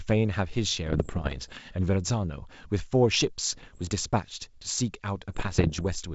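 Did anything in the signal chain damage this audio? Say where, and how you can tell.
Yes, there are bit errors on the ADPCM link carrying this G.722 speech. Pops and rough, gritty bursts with brief level jumps show up at 0.86–1.59 s, 3.53–3.92 s and 5.29–5.83 s. Each flipped bit throws off the decoder's step size and predictor, so the damage rings on briefly.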